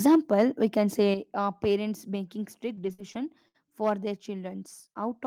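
From 0.05 to 0.41 s the peaks have flattened tops, a microphone overload, likely from input gain set too high so the peaks ran about 3 dB past the converter's limit. A few percent of samples sit pinned at the converter's limit, giving a harsh crackle and flat-topped waveform peaks.

Inside that burst, at 0.15 s just before "we can", the microphone volume steps down by about 4 dB, likely the call software reacting to the clipping. Another step of about 6 dB follows at 1.14 s, between "we can" and "uh parents". Each shows as a sudden drop in waveform envelope and a slightly darker spectrogram from that point on.

From 2.75 to 3.56 s, just before "for their", repeated packet loss makes the audio choppy. Four gaps, the longest 62 ms, total about 160 ms missing, and the concealment extends the last sound to fill them, covering 18% of the span. On the spectrogram these patches show as smeared, repeated textures rather than clean breaks.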